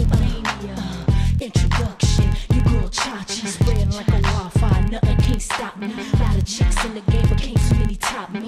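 From start to finish there's a steady tick-buzz at about 21.5 Hz, the filter restarted on every block. It's dropping its state and starting each block from silence, which fits 2048-sample blocks, so every block opens with a little transient that gets louder as the sound does.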